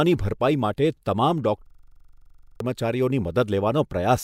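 A harsh rattling stutter cuts into the speech from 1.66 to 2.60 s: one 42.7 ms fragment repeats exactly, over twenty times at 23.4 Hz, which fits a 2048-sample buffer. This is a system hang loop, in which the system froze while the hardware kept replaying its ring buffer, and about a second of audio was lost.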